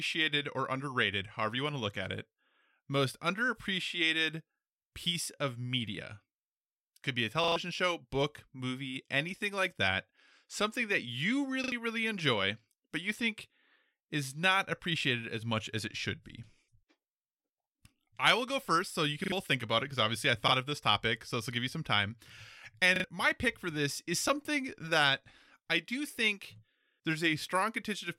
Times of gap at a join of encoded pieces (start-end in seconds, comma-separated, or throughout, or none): none